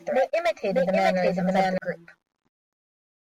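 From the very start of the clip until 1.78 s, the speech carries a doubled audio track: a second, full-band copy trails the original by roughly 0.7 s at about the same level, so each phrase is heard twice, overlapping itself. The copy has no reverb tail or room colouring, unlike a true echo, and it cuts off abruptly at 1.78 s. The likely cause is the signal being captured again through a slower path and mixed back in.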